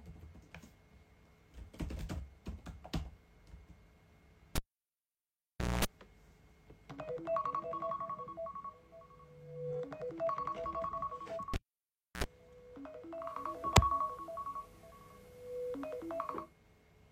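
At 4.55 s and again at 11.54 s, a cable is pulled and plugged in. Each event opens with a pop, a sharp spike in the waveform, then a near-flat gap: about 1.24 s the first time and 0.65 s the second. While only the tip touches, a burst of 60 Hz mains buzz follows, lasting 0.22 s in the first event and 65 ms in the second. It shows as stacked horizontal harmonic lines on a spectrogram. A second pop marks the return of the audio at 5.85 s and 12.24 s.

From 13.11 to 16.60 s, digital radio blends to analogue FM. The digital signal drops out, and a 278 ms cross-fade brings in the analogue broadcast and later returns. During that stretch a faint hiss floor rises to roughly 35 dB below the audio, and the level shifts by about 3 dB.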